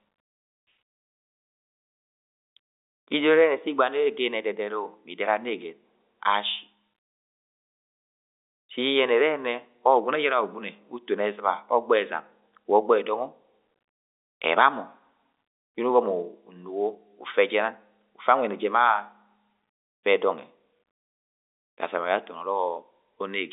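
No technical faults can be heard anywhere in this speech recording. It carries the narrow sound of G.711 telephone coding, with the line band running from about 300 Hz to 3.7 kHz and nothing audible above roughly 3.8 kHz.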